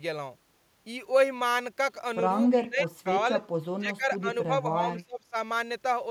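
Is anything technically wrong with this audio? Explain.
Yes. At 2.51 to 2.56 s there is a brief echo leak: a faint delayed copy of the speech, about 283 ms late and roughly 25 dB down, likely from a loudspeaker echo canceller letting residual pickup through.

Speech suppressed in double talk follows at 2.56 to 3.22 s, 3.78 to 4.48 s and 4.72 to 5.34 s. The speech dips by around 15 to 20 dB in patches of about half a second, likely because the canceller attenuated the talker along with the echo.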